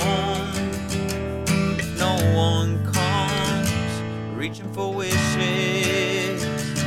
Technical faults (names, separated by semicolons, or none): one channel drops out